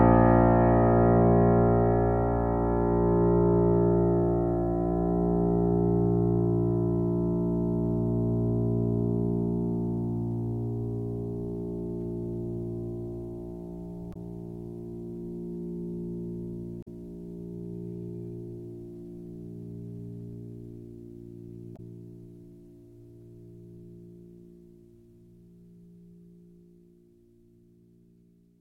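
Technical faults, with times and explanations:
14.10–14.17 s, 16.81–16.88 s and 21.73–21.80 s, damaged data in a compressed stream: three short glitches cut into the music, each about 64 ms long. At each point a stretch of the compressed data is corrupt, so the decoder cannot read those frames properly, loses its place in the stream and has to hunt for the next valid frame header. The garbled output in between is what produces the abrupt glitches.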